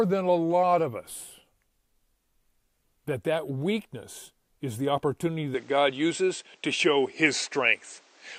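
At 5.54 s, right after "weakness is the opportunity", the sound turns duller and boxier and stays that way to the end, with no gap at the change. This is most likely an input switched to a poorer device. The new path passes nothing above 8.6 kHz, so a spectrogram shows the top band cut flat. A new background noise sits roughly 35 dB under the signal, and the waveform steps in level by a few decibels.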